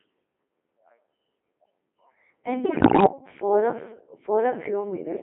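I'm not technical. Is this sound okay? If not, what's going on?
No. Throughout, the voice sounds robotic, buzzy and thin. That's the Codec 2 vocoder, a digital-radio system that rebuilds speech from a few basic settings instead of sending the real sound.

From 2.64 to 3.06 s, the voice breaks into warbles and jumpy pitch. Those are bit errors on digital voice radio, where roughly one bit in ten arrived wrong and scrambled those settings.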